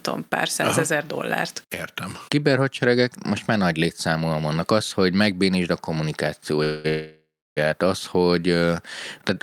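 Speech with two call audio freezes in quick succession, likely from packets held up in transit until the jitter buffer ran dry: the sound is stretched into a fading buzz from 6.63 to 6.86 s, then again from 6.88 to 7.59 s, where the fill dies to about 0.31 s of silence before "az hogy" resumes. Unlike a packet-loss dropout, nothing is cut; the speech picks up exactly where it stopped, about 0.89 s later overall.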